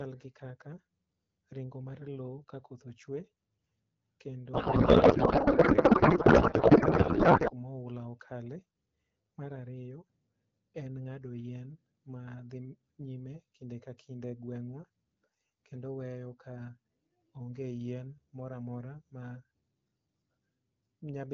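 From 4.53 to 7.52 s the speech becomes garbled, warbling noise that barely follows it. This is a codec payload misread, fitting octet-aligned AMR frames being unpacked as bandwidth-efficient.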